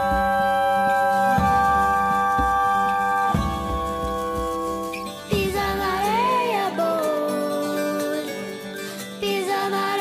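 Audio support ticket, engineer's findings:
Findings: no audible fault detected anywhere in the clip.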